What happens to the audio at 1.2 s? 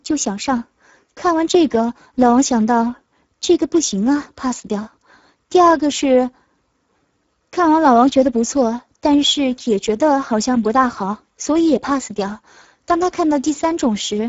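At 1.2 s, as throughout, Speex codec damage: a low bitrate, near 10 kbps, starves the excitation, so speech sounds noisy and hoarse, with nothing above 7.7 kHz.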